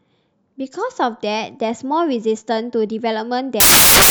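At 3.60 s the speech breaks into loud broadband noise that runs to the end at 4.10 s. These are samples built from the wrong bytes. The reader has assembled each sample incorrectly, perhaps offset by a byte or with the byte order swapped. The rapidly changing low bits now carry most of each value. The result is a harsh hiss.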